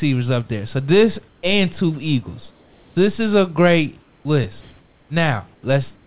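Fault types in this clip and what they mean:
Comfort noise in place of the background: six pauses lose their room tone to steady, mostly quieter synthetic hiss, a smooth band shaped roughly like the background on a spectrogram, likely from discontinuous transmission.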